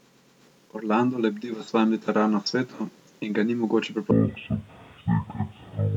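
From 4.11 s to the end at 5.97 s, the speech drops to half speed and sits a full octave, 12 semitones, lower. This is stereo read as mono: the left and right samples, which alternate in the stream, are taken one after another as a single channel, so each moment of sound lasts twice as long. Unlike a simple slowed playback, the doubled-up channel data leaves a fainter mirrored copy of the sound in the upper half of the spectrum.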